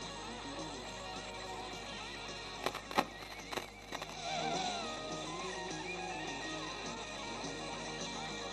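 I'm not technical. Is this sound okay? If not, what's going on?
No. Mains hum runs through the whole clip: a steady, fairly loud low buzz at 50 Hz, where electricity from the power supply leaks into the recording.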